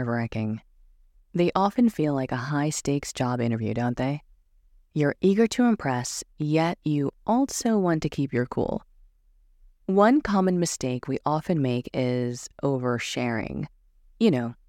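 No technical faults can be heard anywhere in the speech.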